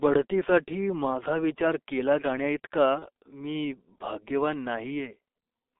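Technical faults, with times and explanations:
Throughout: G.723.1 codec. The band runs from 300 Hz to 3.6 kHz. Heavy coding at roughly 6 kbit/s makes the speech muffled and hoarse, with smeared consonants.
2.99 to 3.06 s: VoIP packet loss concealed by the speech codec. About 30 ms of audio went missing. The decoder repeated its last pitch and filter, so a brief fading buzzy tone or coloured noise replaces the speech.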